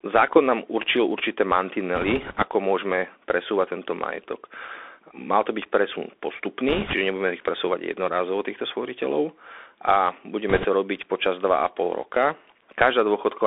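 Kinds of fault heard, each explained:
Bluetooth CVSD headset codec: The speech sounds thin and boxed in, with nothing above about 3.5 kHz and little below 300 Hz. A gritty, granular hiss sits underneath, s sounds come out scratchy, and loud bright passages turn rough. This is the narrowband headset codec, which sends one bit per sample saying only up or down while its step size adapts. The damage is plainly audible throughout and fits a 64 kbps CVSD link.
bit errors on a Bluetooth voice link: Three short bursts of rushing crackle spread over the speech, without sharp clicks. They come at 1.95 to 2.43 s after "nám určil určité", at 6.68 to 6.93 s just before "nebudeme ich", and at 10.49 to 10.66 s between "jednorázovo týchto sporiteľov a" and "robiť počas". Flipped bits each nudge the step only slightly and then fade, so they blur into noise. The later bursts are shorter but rougher, pointing to error rates of a few percent.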